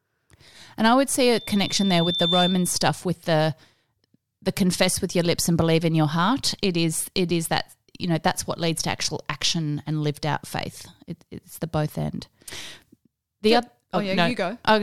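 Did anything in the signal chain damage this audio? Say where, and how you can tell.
Yes. From 1.30 s to 2.83 s a single tone at 3.6 kHz swells over about a second until it sits roughly 5 dB above the speech. That is loudspeaker feedback squeal, arising in the acoustic loop between playback and the analogue microphone input. The microphone was picking up the loudspeaker it was driving, and at 3.6 kHz the round-trip gain exceeded unity, so that single frequency kept reinforcing itself.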